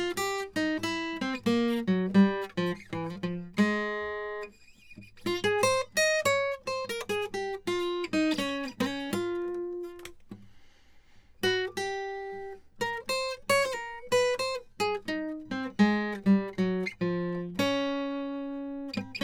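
No technical faults are audible.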